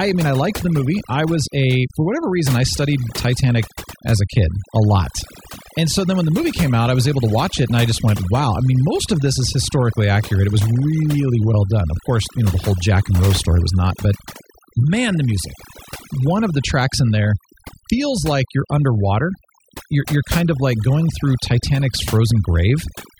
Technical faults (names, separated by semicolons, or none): overdone noise removal